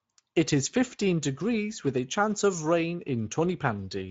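From start to finish the speech sounds noisy and hoarse, with a grainy edge on the voice and nothing heard above about 7.7 kHz. This is Speex codec damage, plainly audible throughout. The CELP coder has too few bits to model the excitation accurately, so the voice picks up a rough texture, and the upper band is filled with shaped noise rather than true detail. The level of damage fits a wideband mode around 17 kbps.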